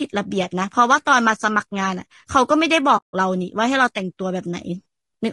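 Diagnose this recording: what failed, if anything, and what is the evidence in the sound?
Codec stage: the speech is rough and grainy throughout, with noise between harmonics and a dulled top band, likely low-delay AAC compression (AAC-ELD) at around 32 kbps.

Network stage: from 2.97 to 3.14 s, AAC frame loss with muting leaves a 160 ms soft-edged hole, faded out and back in by the decoder's overlapping windows.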